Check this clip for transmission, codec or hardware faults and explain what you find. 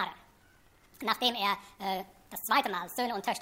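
One fault runs through the whole clip: a wrong sample rate. From start to finish the audio sounds hurried and raised in pitch, everything playing 1.5 times too fast and about 7 semitones too high, so transients crowd together and the tonal balance shifts upward. This happens when samples are clocked out faster than they were captured, with no rate conversion in between, so speed and pitch rise by the same ratio. A 1.5 ratio fits audio made at 32 kHz being played at 48 kHz.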